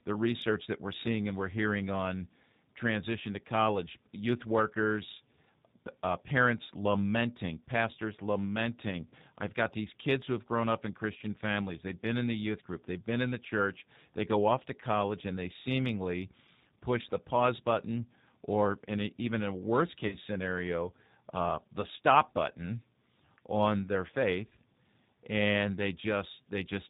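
Throughout, the speech carries plainly audible G.729 codec damage: an 8 kbit/s model rebuilds the voice, giving a rough, synthetic quality with nothing above 4 kHz. At 9.10 s, after "parents lamenting pastors lamenting", and at 20.07 s, before "scenario uh the stop", VoIP packet loss concealed by the speech codec stretches about 20 ms and 40 ms gaps into a fading buzzy tone or coloured noise.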